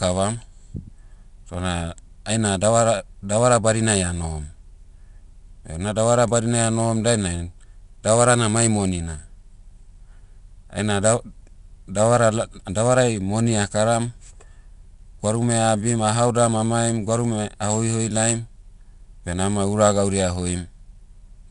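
From start to finish the speech carries plainly audible 4-bit ADPCM compression. Each sample is coded as a coarse 4-bit step from a predicted value, so the quantisation error rides along with the level: a gritty hiss that swells on loud syllables and roughens sharp onsets. Nothing sounds above 10.6 kHz, which fits a sample rate near 22 kHz and a stream of about 89 kbps. A spectrogram shows a hard ceiling at 10.6 kHz and a noise haze filling the gaps wherever energy is high.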